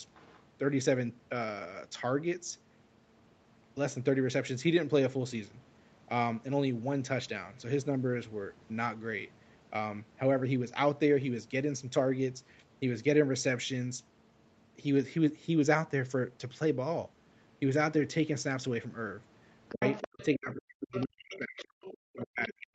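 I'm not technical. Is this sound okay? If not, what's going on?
No. The phone's echo canceller likely failed to fully remove the other caller's voice picked up from the loudspeaker, so the other side's voice leaks through: faintly from 0.14 to 0.41 seconds, then much louder from 19.69 to 20.25 and from 20.94 to 22.25 seconds.

From 19.71 seconds to the end, both people likely talk at once and the echo canceller can't tell its own speaker from that echo, so it turns both down. This speech suppressed in double talk makes the speaker's voice sink deeply, nearly to silence at its lowest points.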